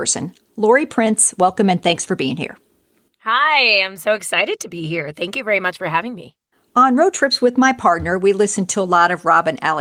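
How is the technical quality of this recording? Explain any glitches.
No glitches can be heard in this recording; the signal stays technically intact throughout.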